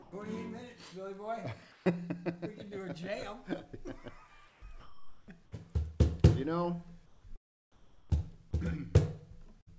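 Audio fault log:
0.02–0.12, 1.72–1.86, 4.48–4.62, 7.06–7.24 and 7.72–8.10 s: comfort noise in place of the background. In each quiet stretch, lasting 100 to 380 ms, the real background gives way to a smooth, featureless hiss. It sits about 1 to 4 dB lower than the background around it. The likely cause is discontinuous transmission. The sender went quiet when its detector heard nothing, and the receiver made up shaped noise. That background already sat about 24 to 30 dB below the loud parts.
4.80–5.28 s: sound dropped by the voice detector. For 480 ms the audio turns into steady, flat noise. About 180 ms of real sound vanishes inside it. The sound returns once the detector fires again. The likely cause is that the sender's voice detector mistook quiet sound for background and stopped sending. The receiver then filled the hole with comfort noise, so the missing part is replaced rather than silent.
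9.61–9.68 s: burst of packet loss. About 60 ms of audio goes missing near the end. The receiver stretches the last sound for 54 ms and turns it down, so it comes out as a brief held, fading tail. The audio then picks up further on, with the part in between gone. Across this passage, as everywhere, nothing reaches above 8 kHz, which fits a G.722 call path at 64 kbps.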